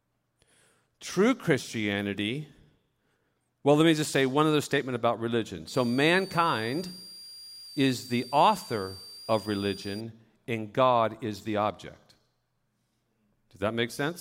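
From 5.68 to 10.01 s a switching supply whistle sits under the speech: a power supply's converter oscillating in the audible band. It is a thin high tone wandering between 4.53 and 4.78 kHz, roughly 20 dB below the voice, and it shows on a spectrogram as a narrow, slightly wavering horizontal line.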